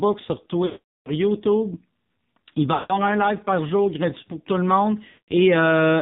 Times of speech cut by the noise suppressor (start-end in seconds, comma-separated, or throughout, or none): none